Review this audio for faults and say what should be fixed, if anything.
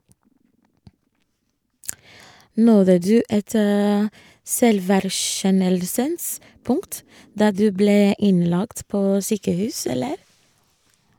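Nothing here needs fixing, since I can't hear any fault anywhere in the recording.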